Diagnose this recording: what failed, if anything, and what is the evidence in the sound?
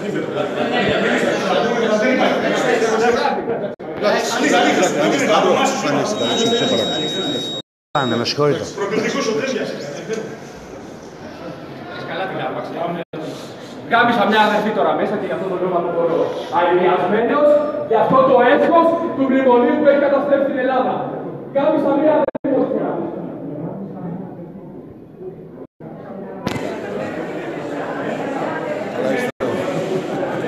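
Digital broadcast dropouts occur at 3.74 to 3.80 s, 7.60 to 7.95 s, 13.03 to 13.14 s, 22.24 to 22.45 s, 25.65 to 25.81 s and 29.30 to 29.41 s. The sound fades to silence over about 8 ms and returns later. The 22.24 s event breaks into several short holes, the longest 72 ms. The gaps run from 48 to 336 ms, in steps that fit 24 ms frames. This points to the reception and decoding stage: frames arrive corrupt or not at all, and the receiver mutes until good frames resume.

A feedback whistle sits at 3.8 kHz from 6.10 to 8.29 s. It is a thin tone at one pitch roughly 10 dB below the sound, swelling and fading slowly in level. This is an analogue acoustic-path problem, likely caused by a loudspeaker-to-microphone loop held just at the edge of oscillation. The loop gain is high enough for one frequency to sustain itself but not enough for it to run away.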